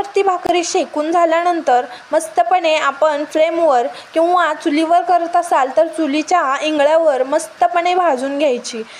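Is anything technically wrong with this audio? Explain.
Yes. From 0.47 to 0.49 s there is a gap at a join of encoded pieces: a silence of about 25 ms where separately encoded segments were butted together with their encoder delay and last-frame padding left in. Unlike a dropout, the sound resumes exactly where it stopped, and the codec smears the gap's edges.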